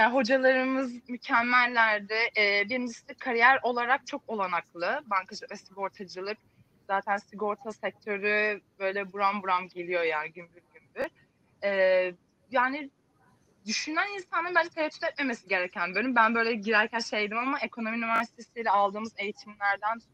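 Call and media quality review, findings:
Repeated buffer at 11.02 s (one extra play) and 18.16 to 18.20 s (two extra plays): brief stutter with hard joins, consistent with a 20 ms playout buffer replayed after late data.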